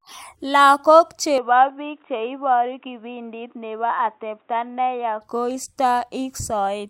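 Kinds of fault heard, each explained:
Input switched to a poorer device: From 1.38 s to 5.21 s the speech suddenly turns dull and boxy. Nothing comes through above 3.8 kHz, so the upper band drops away. There is no gap at the switch, and loudness stays about the same. A faint new background noise appears, sitting far below the voice. At 5.21 s the full, clear sound returns. The likely cause is the recording jumping to a narrower-band microphone or headset profile and back.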